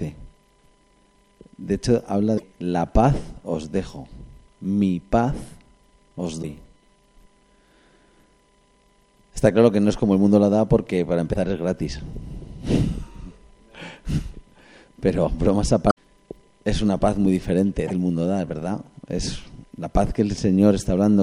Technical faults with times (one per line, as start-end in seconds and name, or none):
2.34-2.44 damaged data in a compressed stream
6.39-6.44 damaged data in a compressed stream
11.30-11.37 damaged data in a compressed stream
15.87-15.97 damaged data in a compressed stream
17.83-17.91 damaged data in a compressed stream